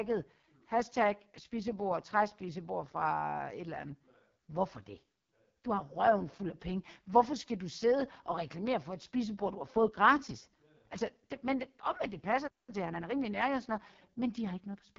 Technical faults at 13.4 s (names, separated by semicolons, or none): AMR wideband (HD Voice) codec; time-compressed catch-up